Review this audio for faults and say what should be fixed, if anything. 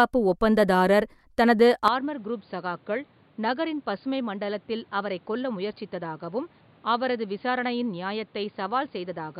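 At 1.88 s, right after "ஒப்பந்ததாரர் தனது", the speech abruptly goes duller and boxier and stays that way to the end. Nothing remains above 4.8 kHz, the level falls by about 10 dB, and a new background noise appears roughly 30 dB under the speech. The switch is seamless, with no gap. This is likely the input switched to a poorer device, a narrower-band microphone or a headset call profile. A simple bandwidth cut or a gain drop would leave the noise floor and tone unchanged; here all three shift together. Lock the input device for the whole session and disable automatic switching to headset call profiles.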